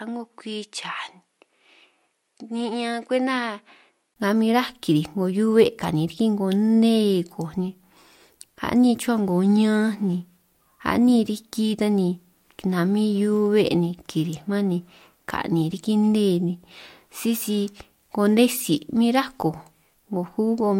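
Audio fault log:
0.00–4.16 s input switched to a poorer device: speech duller and roughly 10 dB quieter, spectrogram blank above 11.4 kHz, 20 ms waveform gap at 4.16 s; likely another microphone.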